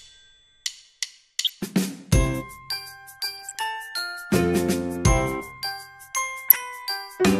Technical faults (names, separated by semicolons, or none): MP2 compression; DAB burbling